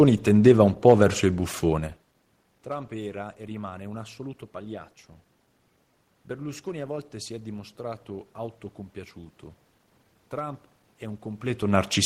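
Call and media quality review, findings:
No findings; the call and media quality review turned up no system faults in this speech.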